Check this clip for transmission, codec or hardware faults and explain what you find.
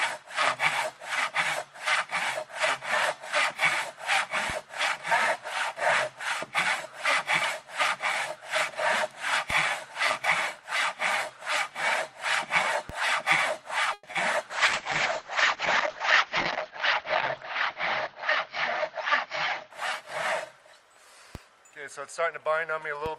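Several faults appear: repeated DC steps, a call freeze, concealed packet loss, a bitrate drop and a jitter buffer speed-up.

DC steps at 4.50, 9.50, 12.90, 21.35 and 23.06 s: the waveform baseline jumps, then decays back through a roughly 20 Hz high-pass. Each is a low thump, with a vertical low-frequency smear on the spectrogram.

A call audio freeze from 13.93 to 14.05 s stretches the last sound into a 100 ms fading buzz, likely from delayed packets emptying the jitter buffer. Nothing is lost, but the audio resumes late.

Short concealed packet loss at 14.11 to 14.15 s covers a 20 ms hole with synthesized continuation. It sounds like a quick smear, and the spectrogram shows blurred, flattened detail.

A call bitrate drop from 14.51 to 20.95 s takes coding from 40 to 8 kbps, bottoming out for about 2.7 s. The spectrogram ceiling falls from 20 kHz to 6 kHz, and the sound turns muffled and watery.

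A jitter buffer speed-up from 16.67 to 18.16 s trims pitch-period slices totalling roughly 70 ms. Playback runs about 4% fast at unchanged pitch, and the waveform looks subtly compressed in time.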